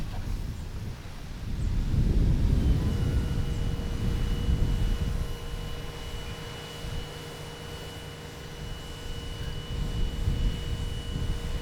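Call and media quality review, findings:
Audio read two samples at a time (double speed), whole clip. Playback runs at exactly 2x with pitch up 12 semitones, a clean octave. Probable component: decoder or playback format negotiation. Sample pairs are consumed as single frames, so the stream plays twice as fast and an octave higher. Unlike a sample-rate mismatch, the ratio is an exact 2, not an arbitrary ratio with a clean shift.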